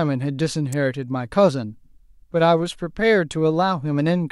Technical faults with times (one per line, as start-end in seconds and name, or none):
0.72 electrical switching spike